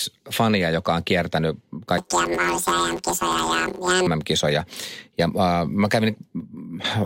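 Speech clip, and from 1.98 to 4.08 s, right after "joka on kiertänyt", it turns into a robotic buzz. That's planar audio read as interleaved: the blocks are about 10.9 ms long, so each one replays twice at double speed and you get a buzz at about 92 Hz rather than a clear octave jump.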